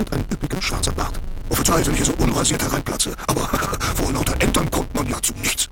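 The audio has a block size mismatch with truncation from start to finish. A steady buzz sits under the sound at 188 Hz. That is the rate at which blocks are cut off. Each block arrives longer than the next stage reads, and the tail of every block is discarded. The buzz fits a 256-sample read block. Because material is dropped, the sound runs about 1.88 times too fast. Its pitch stays close to normal.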